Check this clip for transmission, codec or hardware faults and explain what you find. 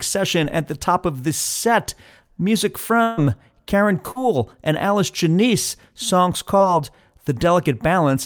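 Transmission faults are present: one burst of packet loss and two short concealed packet losses.

Burst of packet loss, 3.03 to 3.19 s: about 140 ms never arrived in time, so the receiver stretched and faded the preceding sound, then resumed with that stretch missing.

Short concealed packet loss, 4.11 to 4.17 s and 6.57 to 6.61 s: gaps of 40 ms and 20 ms were patched by extending the last sound, leaving a brief smear before real audio blends back in.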